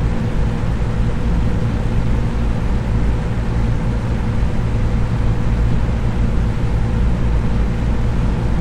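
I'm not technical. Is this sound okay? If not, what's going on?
No. There are three brief glitches at 1.79, 4.32 and 7.69 seconds. These come from damaged data in a compressed stream: corrupted bits make the player briefly misread the sound.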